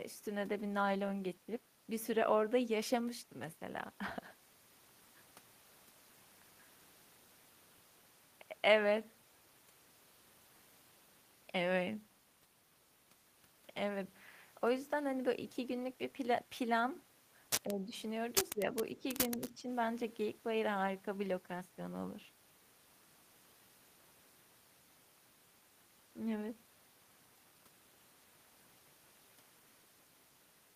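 An echo canceller that likely mistook the talker for loudspeaker echo while both sides spoke at once pulled the level down, giving speech suppressed in double talk in four short bursts. At 17.65 to 17.92 s the speech sinks by about 10 dB, at 18.53 to 18.76 s by about 15 dB, then briefly by about 5 dB at 18.96 to 19.04 s and again at 19.29 to 19.68 s, so the voice fades and dips unevenly.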